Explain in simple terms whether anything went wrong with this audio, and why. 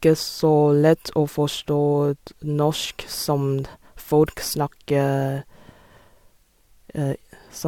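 Nothing went wrong here.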